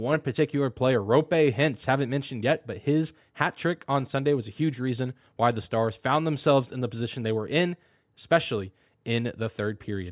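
A short recording of speech, with no technical fault to point to anywhere in it. Nothing in the signal path calls for a time stamp or a cause.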